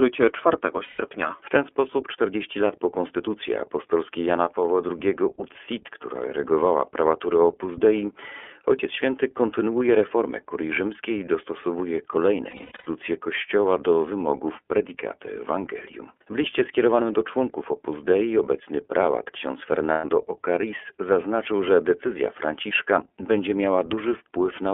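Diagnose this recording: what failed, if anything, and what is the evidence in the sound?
Codec stage: the iLBC codec limits the speech to about 300 Hz to 3.4 kHz, with a rough, synthetic edge, which fits its 30 ms frame mode. Plain band-limiting would sound smooth, not synthetic.

Network stage: lost iLBC frames at 0.83–1.01 s, after "rzymskiej i dostosowuje kolejne" at 12.5–12.88 s (scattered bursts), and after "obecny prałat ksiądz" at 19.92–20.05 s. Each gap is a held, buzzy vowel rather than silence, and recovery is immediate.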